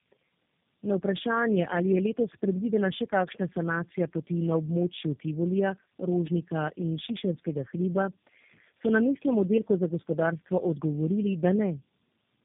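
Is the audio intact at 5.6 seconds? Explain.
No. At 5.6 s the speech carries tandem speech coding, which runs through the whole clip. The sound points to three low-rate speech coders in a row, G.729A-like and AMR-NB-like, each re-encoding the previous one's already degraded output, so their errors compound. Nothing is heard above 3.7 kHz, and the voice is rough, muffled and warbly. A single codec would sound band-limited but far cleaner. The stacked roughness and warble mark this as tandeming.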